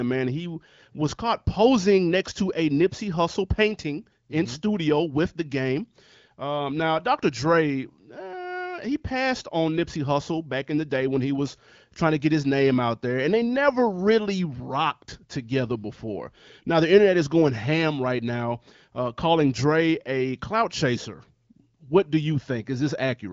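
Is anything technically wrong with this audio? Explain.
No, nothing in this speech recording stood out as a technical problem on listening.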